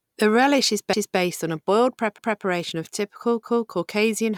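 Overlapping chunks at 0.93–1.19 s after "relish is", 2.18–2.44 s after "on a boiled", and 3.43–3.69 s after "of typical". Each 1.0 s chunk begins before the previous one ends, so 250 ms replays at every join, heard as a regular stutter.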